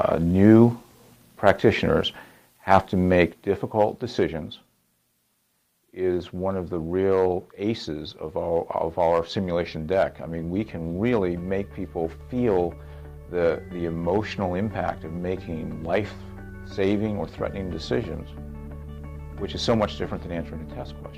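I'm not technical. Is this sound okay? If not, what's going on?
Yes, nothing wrong can be heard in this sound. Its loudness is smoothly turned down or up at times, with no sudden jumps or drops.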